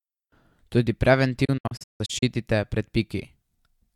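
Around 1.45 s the speech hits a digital broadcast dropout that runs until about 2.23 s. The receiver stopped getting clean frames and muted itself until good ones came back, so you hear the audio drop out in several short holes rather than one gap. Each cut fades in just 8 ms. Roughly half of that stretch, about 384 ms, is lost outright, and the longest single hole is 160 ms.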